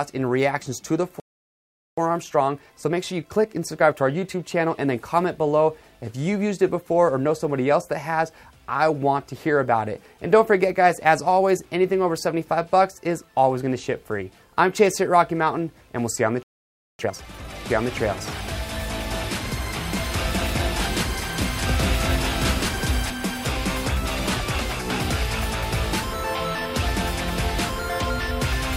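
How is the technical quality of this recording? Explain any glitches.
The recording has clear playback problems: two dropouts, each followed by hurried audio, and later a stretch where the sound is doubled.

Playback stall at 1.2 to 1.98 s and 16.43 to 16.99 s: the audio cuts to silence for about 0.78 s and then 0.56 s. The likely cause is the player running out of buffered data or its thread being blocked.

Time-compressed catch-up at 1.98 to 4.98 s, running 1.1 times normal speed, and at 16.99 to 17.55 s, running twice normal speed: the audio sounds rushed but keeps its pitch. The player is trimming small cross-faded slices to clear the backlog left by each stall.

Doubled audio track at 17.70 to 23.10 s: a second full-band copy runs about a second and a half behind, at roughly the same loudness, with no reverb tail, and it starts and stops abruptly. This is likely a second capture through a slower path mixed in with the original.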